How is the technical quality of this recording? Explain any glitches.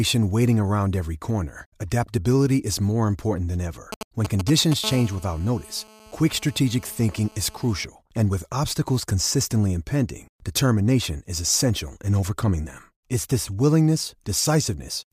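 Two bursts of mobile-phone interference get into the recording, one right after the other.

GSM signalling bursts come in from 3.92 to 4.74 s, just after "more important than ever": a galloping dit-dit-dit of short 217 Hz buzzes, nearly as loud as the speech. A nearby 2G phone is handshaking, and the audio circuitry rectifies those brief radio pulses.

GSM phone buzz follows from 4.84 to 7.85 s, a steady, raspy 217 Hz buzz with plenty of harmonics, about 21 dB below the speech. That's the phone now in a call, transmitting 217 bursts a second, with each radio pulse rectified into the audio path.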